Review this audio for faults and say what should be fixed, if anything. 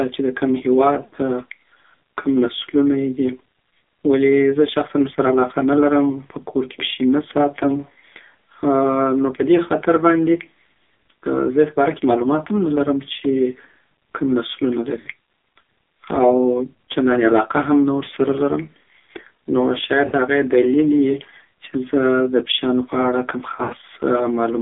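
The speech is band-limited to roughly 300 Hz to 3.5 kHz and sounds buzzy and synthetic throughout. This is heavy AMR narrowband mobile codec damage, consistent with a low mode near 5.9 kbps. Unlike plain telephone filtering, the voice itself is resynthesised with a metallic, pulse-driven edge. Preventing it means carrying the call on a wideband codec or a higher AMR mode.

Lost AMR speech frames cause a brief dip at 6.12–6.19 s and smeared, sustained-then-fading dropouts at 1.06–1.15 s, 15.00–15.08 s, 20.06–20.14 s and 23.56–23.74 s. The last is the longest, scattered over about 160 ms. Unlike a hard mute or click, the decoder stretches the last pitch and decays it, and the voice returns rough. Better radio coverage or stronger channel error protection prevents these losses.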